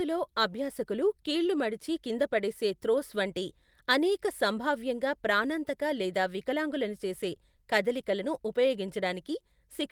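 No technical faults detected.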